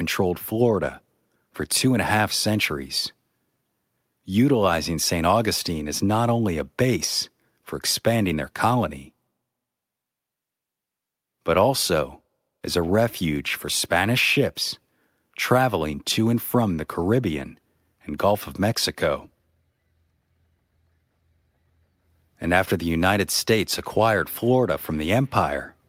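Nothing in the speech recording stood out as a technical fault on listening.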